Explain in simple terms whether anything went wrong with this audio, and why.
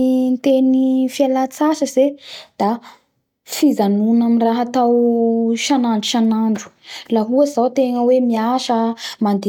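Nothing went wrong with this recording, and no technical fault can be heard anywhere in it. The speech comes through steadily, with no dropouts, glitches or interruptions along the way.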